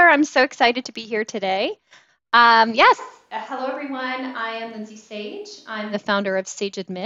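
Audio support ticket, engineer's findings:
Speech abruptly turns roomy, hollow and thin from 3.01 to 5.92 s. Level drops about 10 dB and faint room noise rises. Likely a switch to a distant microphone after the close mic dropped out. Unlike added reverb, tone, level and noise all jump together at both edges.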